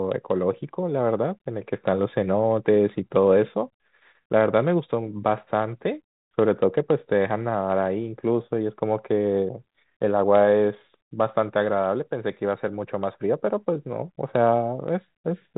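Listening through the speech, nothing stood out as a technical fault at any point.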